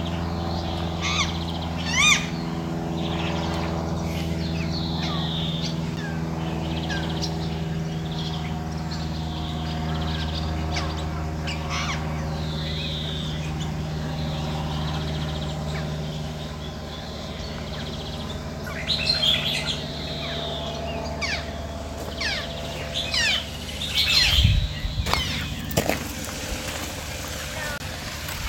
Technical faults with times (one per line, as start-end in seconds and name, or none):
5.96 block of digital silence
9.49 block of digital silence
27.78-27.80 block of digital silence